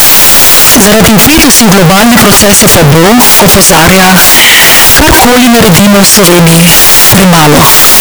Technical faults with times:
0.00-8.01 signed and unsigned mixed up

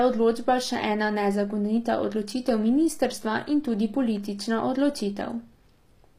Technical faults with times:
0.00-6.18 HE-AAC compression

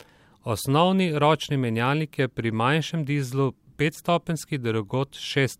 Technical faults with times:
3.94-3.99 corrupt frame decoded

